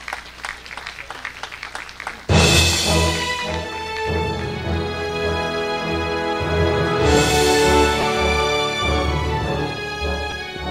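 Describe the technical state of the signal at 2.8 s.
At 2.78 s there are lost LE Audio frames: about 10 ms of the Bluetooth LE Audio stream goes missing, which fits a single lost frame. The LC3 decoder fills the gap by repeating the previous spectrum with randomised signs, so any tonal content turns briefly into a noisy smear. On a spectrogram, harmonic lines dissolve into a thin vertical band of diffuse energy. The waveform shows a short noise-like patch at similar level.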